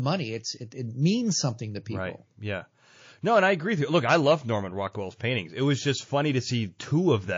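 Throughout the speech, faint detail turns watery and swirly, likely from heavy MP3 compression at a low bitrate, which fits roughly 32 kbps. At 5.17 to 5.20 s, a 29 ms pre-echo appears: hiss rises about 14 dB before an attack, because its quantisation noise spread across a long transform block of about 72 ms.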